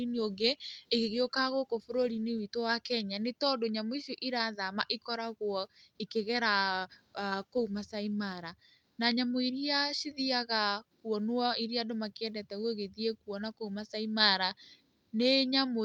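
No technical faults can be heard at any point in the recording.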